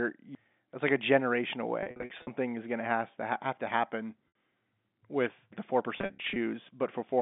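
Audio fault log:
0.35 s and 5.52 s: CD skip. Each is a tick with a mute of about 7 ms, after which playback carries on from a different point. The first comes just before "that's like a generation". The laser has jumped to another turn of the spiral, so the audio resumes displaced by a whole number of disc rotations rather than continuing smoothly. That jump, together with the brief mute, gives the click and the small jump in continuity.
1.83 to 2.27 s, 4.28 to 4.30 s, 5.98 to 6.36 s: packet loss with pitch repetition. In the first burst, between "that's like a generation" and "is going to have", about 270 ms is missing, scattered over 440 ms, with no single gap longer than 50 ms. The third burst loses about 220 ms over 380 ms. The short event right after "have to happen" loses about 70 ms. Each gap is filled by repeating the last pitch period, so the sound briefly holds with a buzzy, sustained quality before the real signal returns. 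Because the gaps are short and closely spaced, this happens in a stuttering succession rather than as a fade to silence.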